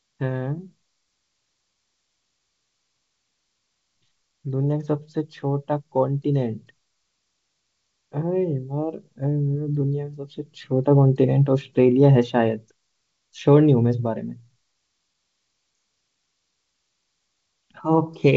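Nothing in the speech signal stands out as a technical problem, with the G.722 wideband telephone coding at 64 kbit/s carrying it up to about 7 kHz and leaving at most a faint hiss in the upper band.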